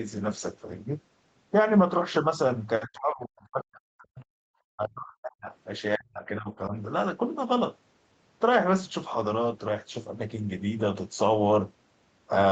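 Between 2.81 and 4.23 s, 4.68 and 5.49 s, and 5.96 and 6.48 s, the speech sinks by roughly 40 dB in patches, then recovers. A much shallower dip follows at 6.67 to 6.73 s. This is speech suppressed in double talk, likely from an echo canceller attenuating the near talker while the far side was also speaking. Unlike packet-loss dropouts, the level is turned down by the echo canceller rather than lost to codec glitches.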